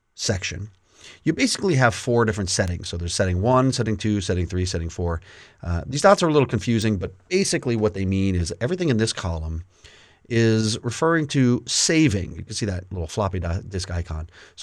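A bit error spike lands at 2.68 s and again at 6.82 s: a flipped bit jumps the waveform by a power of two to about -15 dBFS, then snaps back. Each is a sharp broadband tick unrelated to the sound, the first consistent with a few corrupted samples, the second with just one.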